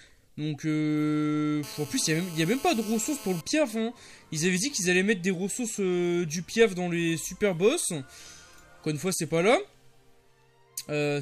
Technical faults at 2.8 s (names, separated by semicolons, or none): GSM phone buzz